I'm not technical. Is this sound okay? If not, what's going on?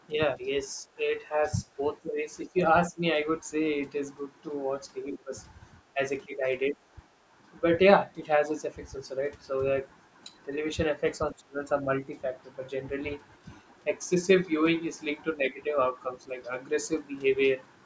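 No. The call's echo control likely mistook the talker for echo while both sides spoke, causing speech suppressed in double talk: the voice briefly dips or drops out around 0.1–0.9, 1.7–3.0, 5.15–5.33, 5.9–6.8, 11.3–11.9 and 15.4–16.3 seconds.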